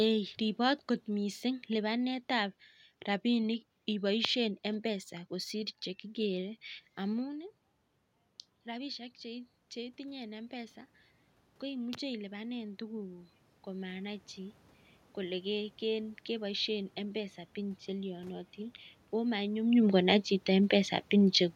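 From 11.61 s to 18.85 s, automatic gain rising is audible. The gain control judged the input too quiet and turned it up slowly, by about 8 dB. The voice and the room noise swell together. Neither jumps.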